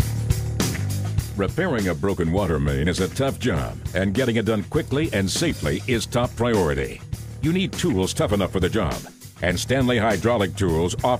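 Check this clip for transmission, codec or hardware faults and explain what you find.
No faults turn up anywhere in the clip.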